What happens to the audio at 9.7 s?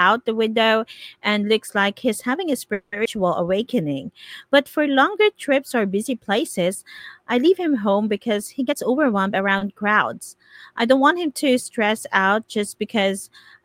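Just before 9.7 s, from 9.58 to 9.69 s, a sound hangs on slightly too long, with a faint buzzy smear where it should have moved on. This is a short stall from a late packet: the next packet arrived late, so the jitter buffer ran dry. The receiver stretched the last sound by about 30 ms to cover the gap, then resumed from the same point. Nothing is lost, but playback now runs about 30 ms later.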